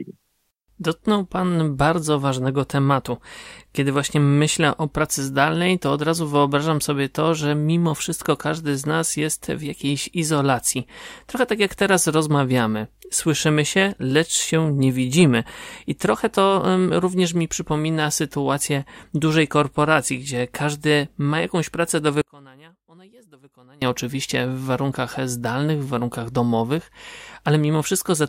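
Speech, where from 22.22 to 23.82 s, between "ma jakąś pracę do" and "oczywiście w warunkach zdalnych", the voice drops about 28 dB to a faint residue, likely one channel inverted cancelling on mono summing; the waveform visibly collapses and the spectrogram dims across all frequencies.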